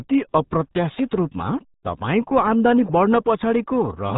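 From start to finish, the speech carries RealAudio 14.4 codec damage. The damage is heavy. Nothing above 3.8 kHz survives, so voices sound muffled and boxed in. Coarse coding leaves a gargly, bubbling texture. The sound points to a very low rate, about 8 kbit/s.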